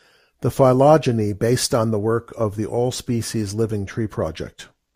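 No technical faults are audible.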